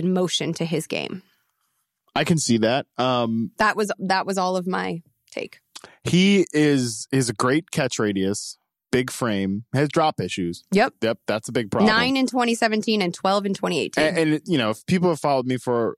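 No technical faults can be heard in this recording.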